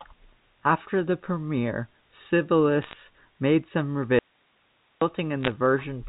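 From 2.82 to 2.93 s, a short burst of sharp ticks and crackle rides over the speech, which itself stays intact underneath. These are bit errors on a digital phone line. Individual bits in the G.711 stream were flipped at a rate of a few tenths of a percent. Each flip corrupts a single 8-bit logarithmic sample, and when the sign or a high-order bit is hit, that sample jumps far from its neighbours and produces a click.

At 4.19 s the speech cuts off abruptly, and for about 0.83 s only faint hiss remains, around 40 dB below the speech level, until the sound snaps back at 5.02 s. This is an audio dropout to a faint residue. The wanted signal was likely lost upstream while the rest of the path stayed live and kept passing its own noise floor. The gap has no fade at either end.

From 5.43 to 5.50 s, a second, briefer cluster of bit errors on a digital phone line gives the same ticking crackle, at a slightly higher error rate of a few tenths of a percent. 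The band-limited telephone sound of the G.711 mu-law coding is audible throughout.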